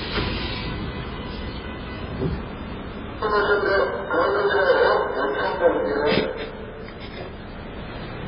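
From start to finish the audio carries heavy damage of the kind MP3 compression leaves. Nothing sounds above about 5.3 kHz. The treble is cut off flat at that point. Quiet detail flickers in and out, giving a watery, swirling texture. Bright sounds turn into metallic chirps. Sharp attacks smear. The likely cause is an MP3 encode at a very low bitrate, which fits about 16 kbps. With so few bits the encoder drops the highs and the weak parts.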